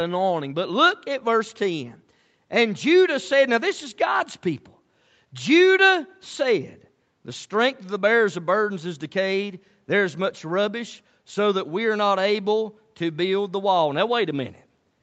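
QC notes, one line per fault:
Speech arrives through ordinary call microphone processing and a WebRTC call path with Opus coding, with nothing present above 8 kHz, and no faults are heard.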